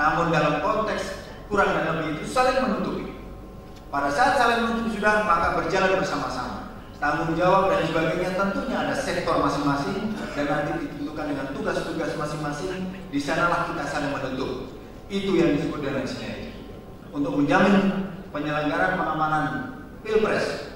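No technical faults turn up anywhere in the audio. Nothing calls for a timestamp or an explanation.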